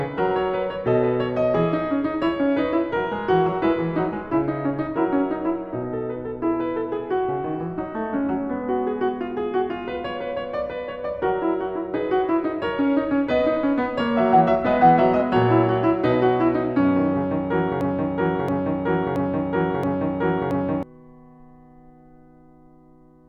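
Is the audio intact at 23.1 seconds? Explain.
Yes, the music plays through 23.1 seconds with no dropout, click, distortion or other fault.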